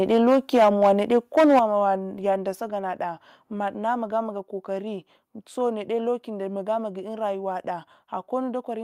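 From the start of the clip to 1.59 s the speech shows microphone overload. The loudest syllables carry a harsh, crackling edge with flattened tops, the sound of peaks driven roughly 9 dB past the converter's ceiling, with something like 7 percent of samples clipped. The likely cause is an input gain set too high, so the waveform runs into the converter's limit and the peaks are cut off.

Within that stretch, at 0.58 s, the level drops by about 3 dB in a single step, the first instance of the microphone volume being stepped down. A second, larger step of about 7 dB comes at 1.59 s, exactly where the clipping stops, and a third of about 3 dB follows at 2.61 s. Each time the speech and the background fall together and abruptly, with no fade. That pattern points to the call software likely reacting to the overload by cutting the device's input volume in discrete steps.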